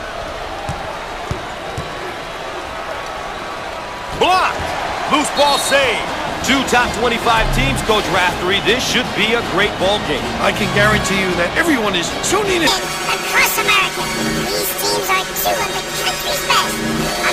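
Planar audio read as interleaved runs from 12.67 s to the end at 17.33 s. Each 10.67 ms block, which fits a 512-sample block size, plays its left half and then its right half at double speed, leaving a robotic buzz at 93.8 Hz with no clear octave shift.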